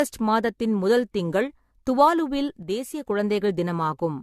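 A speech recording carries generation loss throughout: the sound is swirly, smeared and hollow, with blurred consonant onsets, and it likely comes from about four passes through a lossy AAC-type codec at around 64 kbit/s, each pass requantising on a shifted frame grid. A spectrogram would show a hard ceiling at 14 kHz with scattered holes and smeared transients. Just after "மாதத்தின் முதல் திங்கள் துவாலுவில்", from 2.63 to 3.08 s, one channel drops out. The level falls abruptly by about 6 dB, likely because one stereo channel was lost before a mono sum. The waveform would show a clean step down in amplitude for that stretch, then a step back up.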